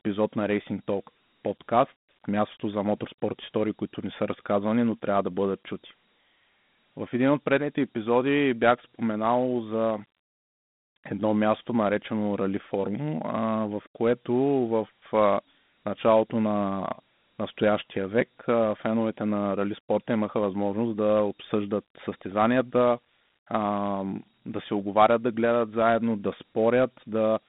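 From start to finish the speech carries Dialogic VOX ADPCM damage: 4-bit adaptive steps leave a gritty hiss that rides on the voice and swells with it, which fits a 32 kbps OKI-style encoding. The audio sits in a phone-line band of about 150 Hz to 3.6 kHz, with nothing above 3.9 kHz. Plain band-limiting would sound muffled but clean, and the grit that follows the speech is what marks this codec.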